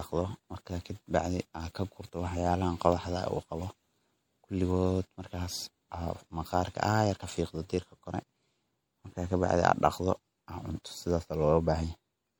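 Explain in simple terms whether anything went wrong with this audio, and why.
MP3 compression damage runs through the whole clip, and it is plainly audible in the speech. The likely cause is an MP3 encoder short of bits: it drops faint details, which flicker in and out from moment to moment, giving a watery, swirly sound.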